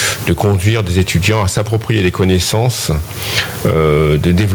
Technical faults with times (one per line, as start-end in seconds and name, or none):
0.00-4.54 gain pumping